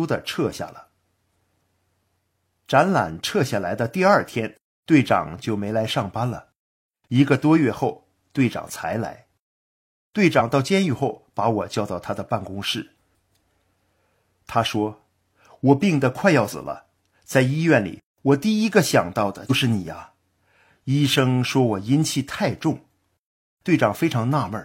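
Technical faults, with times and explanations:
10.36–10.42 s, 16.49–16.55 s and 19.46–19.51 s: compressed frames skipped. The speech jumps ahead by about 50, 150 and 100 ms. These jumps fit whole frames of about 46 ms that went missing or were rejected by the decoder.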